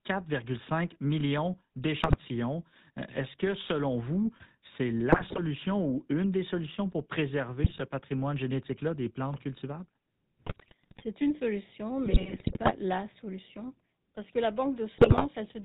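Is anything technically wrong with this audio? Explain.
Yes. Throughout the clip the speech has a buzzy, gravelly roughness, thin and boxed-in, with nothing above 4 kHz. This is the GSM full-rate codec. It models the vocal tract as a filter and drives it with a regularly spaced pulse train that keeps only every third excitation sample. Coarse excitation like that produces the grainy buzz, and the damage is plainly audible here, consistent with the 13 kbps full-rate scheme.

On top of that, GSM bit errors break the voice into squawks, pops and gargling at 2.00–2.15 s, 5.12–5.40 s, 7.64–7.81 s (right after "des solutions pour préserver"), 10.45–11.03 s (between "des plantes cultivables" and "une solution"), 12.06–12.72 s (between "une solution" and "la solution") and 14.96–15.28 s. Corrupted bits reached the decoder and scrambled the filter, pitch and gain values, which bends the spectrum or bursts the level frame by frame. 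The longer runs near 10.5 s and 12.1 s span many consecutive damaged frames.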